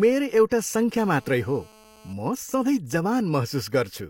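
Speech, with a hard, raspy buzz from 0.99 to 2.13 s, sitting about 28 dB below the speech and running at 217 Hz with a dense stack of harmonics that have nothing to do with the voice. It holds nearly steady throughout. This is GSM phone buzz: a nearby 2G handset on a call transmitting in bursts 217 times a second, with the audio circuitry rectifying those radio pulses into audible noise.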